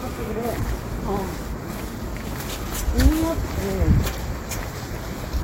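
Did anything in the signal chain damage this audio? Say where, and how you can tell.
Yes. Damaged data in a compressed stream shows up at 2.65 s as a brief glitch lasting only about 14 ms, cutting across the sounds in the clip. The fault sits at the codec stage, in the stored or transmitted bitstream: some bytes there were corrupted, so the decoder misread that frame, lost sync, and had to hunt for the next valid frame header before clean decoding resumed.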